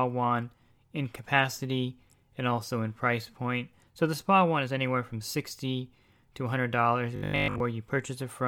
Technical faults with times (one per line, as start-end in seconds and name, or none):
7.16-7.60 robotic sound from repeated short buffers